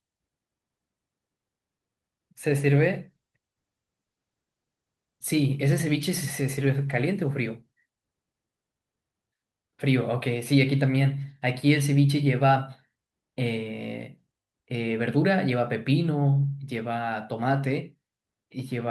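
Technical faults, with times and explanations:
2.5–8.65 s, call bitrate drop: the encoder's rate falls from 64 kbps to 18 kbps, and for about 4.6 s at the bottom the speech turns coarse and watery, with the top end rolled off so it sounds muffled. The codec is spending far fewer bits, so detail is smeared and high frequencies are discarded. Unlike packet loss there are no gaps or clicks; unlike a fixed filter, the dullness arrives and then lifts as the rate recovers.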